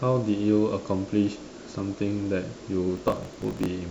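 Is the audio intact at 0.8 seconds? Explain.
Yes, at 0.8 seconds the speech plays through cleanly, with no dropout, distortion or other audible fault at that moment.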